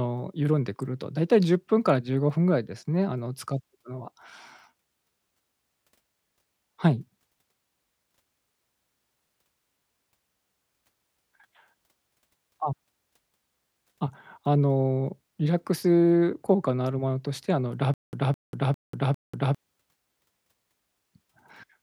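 From 17.94 to 19.55 s the speech breaks into a stutter with silent gaps: a 211 ms fragment plays, drops into about 191 ms of dead digital silence, then returns identically, four times at a steady 402 ms rhythm before normal audio resumes. The likely cause is a stalled player or stream that replayed its last buffered fragment on each retry and then ran dry, so whatever should have sounded during that span never arrives.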